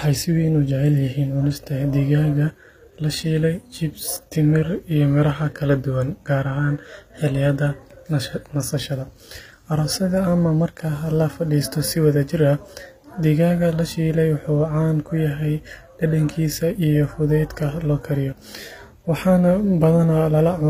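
HE-AAC compression runs throughout the speech, plainly audible: the treble sounds gritty, with metallic, lispy s sounds and nothing above 15.5 kHz. This is likely spectral band replication, treble rebuilt from copied lower bands, which fits a low bitrate around 24 kbps.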